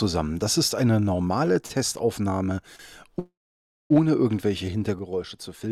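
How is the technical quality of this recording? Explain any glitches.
The recording has several transmission glitches and one level fault, so its technical quality is compromised.

Short stalls from a late packet occur at 1.66 to 1.79 s and at 2.76 to 2.81 s. In each case a packet arrived behind schedule, leaving the jitter buffer empty. The receiver held the last sound going, for about 34 ms the first time and 29 ms the second, then resumed from the same point. Nothing is lost, but the sound briefly hangs with a faint buzzy smear and everything after is pushed later.

A call audio freeze runs from 3.19 to 3.92 s. Packets were likely held up in transit, and the buffer drained. The receiver extended the last sound as a fading buzz, which dies to near silence for roughly 580 ms of the 711 ms gap. Once data flows again, the audio picks up where it stopped, so a pause is inserted rather than material removed.

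A sudden gain jump hits at 4.99 s and lasts to the end. The level drops by about 6 dB in a single step, likely a digital gain change applied without any ramp. Sound and background noise fall together, so the final stretch is audibly quieter, with an abrupt edge where the change lands.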